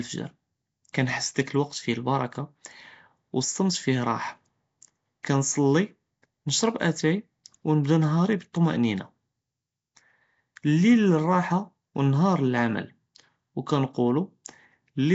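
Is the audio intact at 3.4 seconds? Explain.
No. At 3.4 seconds the speech carries the same damage heard across the whole clip, and it sounds like Nellymoser compression, likely from the Nellymoser Asao codec used for Flash microphone audio. That coder works on short blocks at a fixed bit budget, which fits a rate around 32 kbps. Quiet bands get no bits and are filled with synthetic noise. The result is a rough, hissy halo and a smeared, underwater quality, with nothing above 7.7 kHz.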